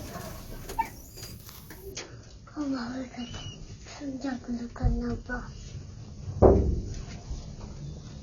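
Adaptive stream at a lower bitrate from 1.92 s to the end: the stream suddenly switches down, with nothing above 7.8 kHz and thicker codec artefacts, which points to roughly 24 kbit/s.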